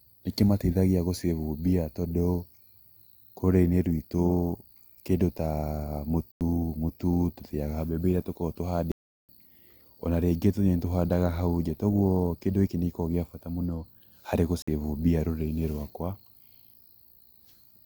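At 6.32 s, 8.92 s and 14.62 s the speech cuts to a block of digital silence lasting 93 ms, 372 ms and 54 ms. The first two fit unfilled 4096- and 16384-sample buffers. The edges are abrupt, unlike a faded dropout.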